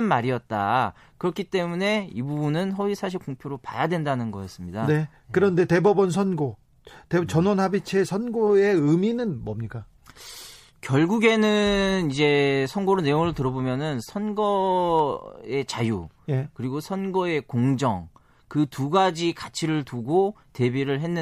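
Sharp single clicks at 3.56 s and 5.87 s are likely dropped samples, where a handful of samples vanish and the waveform jumps abruptly. From 8.75 s to 14.75 s codec artefacts rise suddenly, with no gap at either edge. This is an adaptive stream at a lower bitrate, consistent with a step down from roughly 128 to 48 kbit/s MP3. One more click at 14.99 s comes from the same sample loss.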